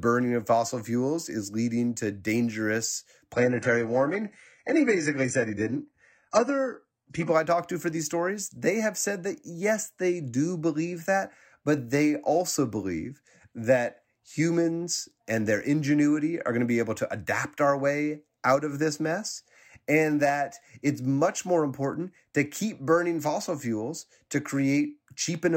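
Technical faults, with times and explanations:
3.32 to 7.32 s, adaptive stream at a lower bitrate: the speech abruptly loses its top end, with nothing above 11.1 kHz, and turns thin, which fits a switch to a low-rate HE-AAC rendition near 12 kbit/s after network throughput dropped. Full quality returns without a gap.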